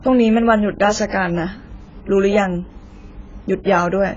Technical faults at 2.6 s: AAC compression

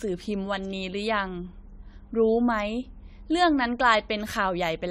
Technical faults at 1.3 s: generation loss

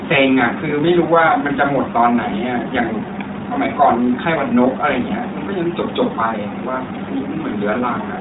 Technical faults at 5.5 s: iLBC codec

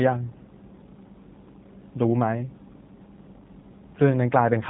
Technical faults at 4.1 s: G.729 codec

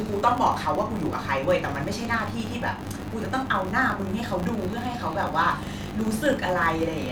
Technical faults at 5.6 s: filter restarted on every block

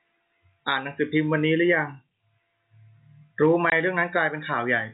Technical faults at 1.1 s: none

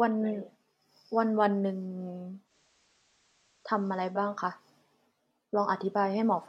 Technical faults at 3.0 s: digital radio blending to analogue

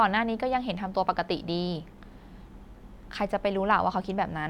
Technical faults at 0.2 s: none

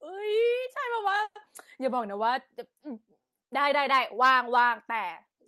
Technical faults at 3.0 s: none

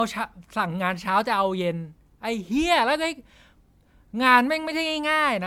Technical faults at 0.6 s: generation loss

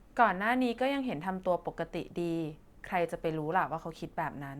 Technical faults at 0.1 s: none

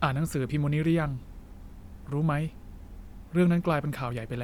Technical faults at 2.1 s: none

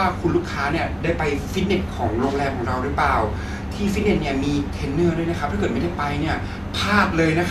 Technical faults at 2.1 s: none

